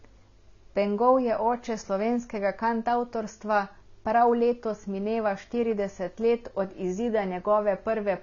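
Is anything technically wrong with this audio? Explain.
Yes. Throughout the speech, the sound is dull and smeared, with warbling vowels and fizzy sibilants. A spectrogram shows a hard ceiling at 6.9 kHz. This is likely AAC compression, consistent with roughly 24 kbps, where coarse quantisation discards high bands.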